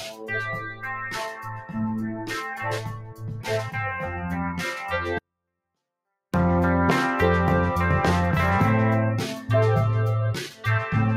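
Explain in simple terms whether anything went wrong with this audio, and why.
The sound keeps pumping and thinning, with held tones and fading tails dropping away. A noise suppressor applied to music or sounds mistook them for background noise. The sound cut by the noise suppressor is clearest around 0.02–0.31, 0.5–0.86, 1.33–1.77, 2.11–2.31 and 2.79–3.5 seconds, where steady parts sink noticeably.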